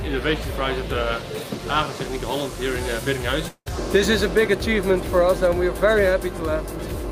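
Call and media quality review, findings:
Long network dropout, 3.48–3.68 s. Sound smears into a fading buzz, then about 60 ms of silence before audio resumes with roughly 180 ms of content gone. Likely packet loss upstream. Receiver concealment extends the last sound, decays to nothing, then restarts past the gap.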